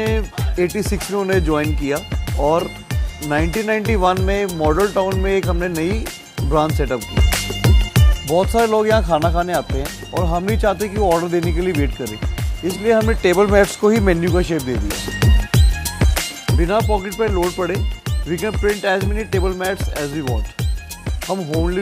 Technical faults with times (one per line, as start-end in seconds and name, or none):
none